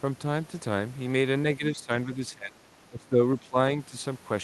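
From 1.58 s the speech keeps dipping: 1.58–1.9 s, 2.17–2.56 s, 2.87–3.18 s, 3.42–3.56 s and 3.9–3.96 s. This is speech suppressed in double talk. The echo canceller likely confused overlapping talk with echo. It turned the talker down, by up to about 20 dB.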